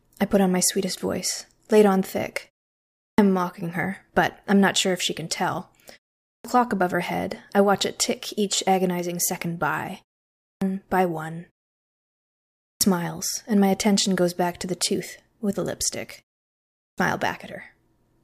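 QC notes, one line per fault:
2.98, 6.27, 10.41, 12.61, 16.8 s: clipped start after a pause. The device wakes late after 0.37 to 1.18 s silences, swallowing 175 to 205 ms of onset, such as before "am mocking her but". The waveform jumps abruptly from flat line to speech energy with no rising edge.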